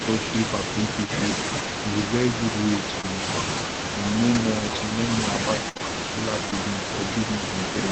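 In this speech clip, a faint delayed double of the talker trails about 0.44 s behind and roughly 15 dB down from 0.0 to 1.11 s, 1.6 to 3.21 s and 3.63 to 4.96 s. This is an echo leak, likely from a far-end loudspeaker whose echo canceller let its microphone pickup return down the line. Brief smears or wobbles at 3.01 to 3.05 s, 5.77 to 5.81 s and 6.51 to 6.54 s mark short concealed packet loss. Each time, about 20 ms never arrived, and the receiver extended the preceding sound before blending back into real audio. At 4.35 s a 20 ms patch turns rough and noisy without any gap. That is a lost packet rebuilt from error correction, where the decoder played the low-bitrate copy carried in the next packet. From 5.69 to 5.77 s the sound stretches into a held, fading tail, then resumes with about 60 ms missing. This is a burst of packet loss, concealed by continuing and attenuating the last sound, all heard through an Opus call path limited to 8 kHz.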